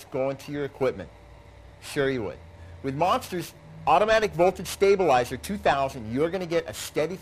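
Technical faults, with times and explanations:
Throughout, periodic clock jitter: the converter's sampling clock is being wobbled at a steady rate of around 2 kHz, so each component of the sound picks up a pair of sidebands about 2 kHz above and below it, strongest on the highest frequencies. This gives a rough, metallic edge that disappears in silent passages. On a spectrogram, ghost traces shadow each bright band at that fixed offset, while the waveform looks essentially unchanged.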